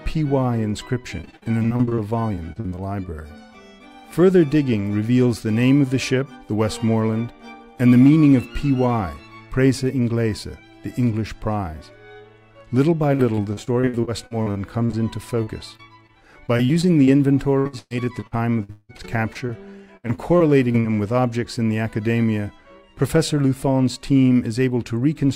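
Repeated packet loss (robotic sound) from 1.21 to 2.79 s and again from 13.15 to 20.86 s: packets kept going missing, and each hole was bridged by stretching the preceding sound, concealing about a fifth of each span. Gaps reach 50 ms, then 181 ms, leaving choppy audio with pieces missing.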